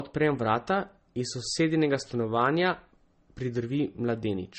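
Throughout the speech, transcoding between lossy codecs likely explains the sound: nothing above 8.4 kHz, with smeared, swirly artefacts layered over watery warbling, unlike a single low-bitrate codec's uniform coloration.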